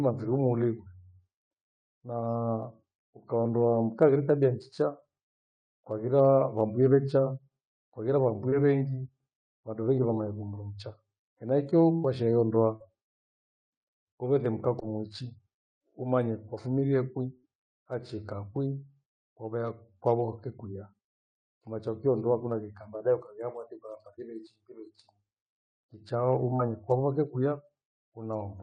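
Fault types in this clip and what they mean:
Short concealed packet loss: Tiny chunks of the call, 20 to 40 ms each, arrived too late or not at all, so the receiver papered over them by stretching the last bit of sound, then blended back in. You get quick smears or wobbles at about 8.5 s, just before "vengi vandu vengi vamanya", then 12.8 s, 14.8 s right after "kuvethe mkaa", 23.0 s, and 26.6 s just ahead of "kwavoke kwia".
Burst of packet loss: Around 17.4 s a longer run of the stream, roughly 60 ms, went missing in one go. The receiver kept extending the last sound for about 61 ms, fading it down as the gap dragged on, then jumped ahead to where the real audio picked up again. So there's a short held or fading patch, and the speech in between is simply gone rather than just blurred.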